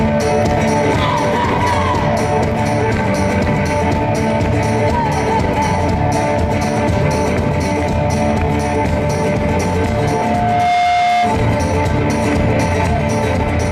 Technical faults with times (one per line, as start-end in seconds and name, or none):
9.71-11.48 loudspeaker feedback squeal